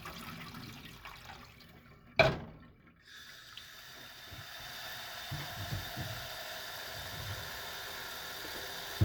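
At 2.80 s, damaged data in the compressed stream makes the decoder lose sync and resync, giving a brief blip, seen as a thin broadband vertical streak and waveform discontinuity.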